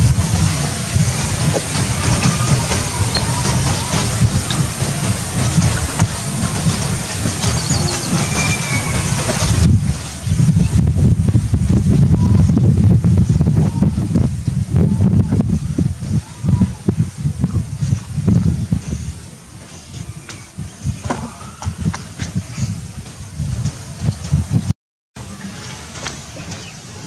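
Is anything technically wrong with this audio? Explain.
Yes. Gain pumping runs throughout the clip. Each loud sound pulls the level down by roughly 20 dB. This likely comes from input gain set far too high, with a fast limiter or compressor clamping it. Dynamics sound squashed.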